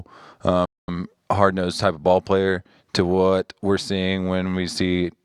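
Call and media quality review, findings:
Playback stall, 0.65–0.88 s: speech drops to silence for about 230 ms, then resumes. Likely player buffer underrun or blocked audio thread. Waveform shows flat gap; spectrogram a clean vertical blank.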